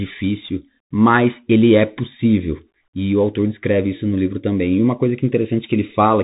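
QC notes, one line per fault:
Throughout, Bluetooth CVSD headset codec: the speech stops dead at about 3.8 kHz, and the one-bit up/down coding, which fits a 64 kbps headset link, lags on loud sharp sounds, so s sounds turn scratchy over a granular hiss, the codec damage plainly audible.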